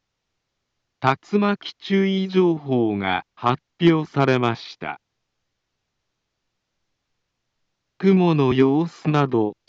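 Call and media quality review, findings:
Compressed frames skipped at 8.50 s. Decoder dropped about one frame, either missing from the stream or rejected as corrupt. Playback jumps ahead roughly 30 ms, consistent with a 26.1 ms codec frame.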